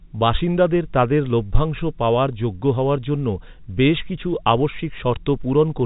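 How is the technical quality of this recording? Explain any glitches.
No glitches are audible; the speech sits in a standard telephone band, with G.711 coding topping out near 3.8 kHz as expected.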